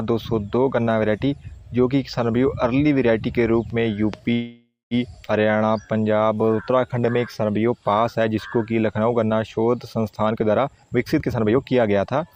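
The audio stops moving forward at 4.33 s in a call audio freeze lasting until 4.94 s. The last sound is drawn out for about 0.6 s and fades, with silence for its final 180 ms. This is likely packets held up in transit, emptying the jitter buffer. At 5.27–5.31 s playback jumps forward in a skip ahead. About 0.2 s of audio is missing, and the two sides are joined almost directly. A jitter buffer slow-down follows from 5.44 to 7.14 s. The buffer rebuilds its reserve by repeating tiny pieces, so the audio runs at 87% speed, with 227 ms added, at unchanged pitch. From 10.31 s to the end there is a jitter buffer speed-up. Short pieces are removed to cut the delay, so playback runs at 125% speed at the same pitch, losing about half a second.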